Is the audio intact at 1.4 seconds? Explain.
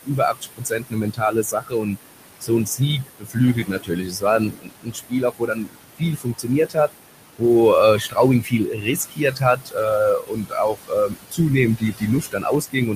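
No. At 1.4 s the audio falls inside a stretch of speech cut by the noise suppressor, running from 0.05 to 1.98 s. The suppressor misread parts of the speech as steady background and attenuated them by up to about 22 dB, for roughly a second in total, so softer syllables sound swallowed and faint. Noise suppressor artifacts are also present here, as across the whole clip. The suppressor pulls the room noise down by about 19 dB between words and lets it rise under them.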